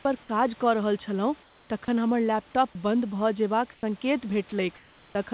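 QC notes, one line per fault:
1.43–1.70 s, 3.74–3.83 s and 4.76–5.15 s, comfort noise in place of the background: the room background, about 31 to 32 dB below the loudest speech, becomes a flat, featureless hiss for 270 ms, 90 ms and 390 ms. It is about 3 dB, 8 dB and 2 dB quieter than the real background, and the first stretch ends just before "तखन हमर". This is likely discontinuous transmission: the sender stopped sending in the pauses and the receiver filled each gap with synthetic noise that roughly matches the background's shape.
2.72–2.75 s and 4.49–4.52 s, sound dropped by the voice detector: a 30 ms gap of steady noise cuts in each time, taking about 20 ms of speech with it. The first comes right after "छलहुँ तखन हमर". The likely cause is the sender's voice detector treating the sound as background and stopping transmission briefly, so the receiver played comfort noise until the detector triggered again. 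Throughout the clip, the call path limits everything to 4 kHz.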